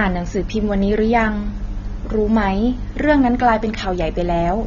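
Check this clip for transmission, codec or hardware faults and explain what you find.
One codec fault runs through the whole speech clip: AAC compression, likely AAC-LC at a low rate consistent with about 24 kbps. The encoder quantises each frame's spectrum coarsely, discarding content and filling gaps, so the sound is dull and smeared, with a warbling, fizzy texture on sibilants and held vowels. A spectrogram shows nothing above 7 kHz, with patchy holes and blurred time detail below; the waveform itself looks unremarkable.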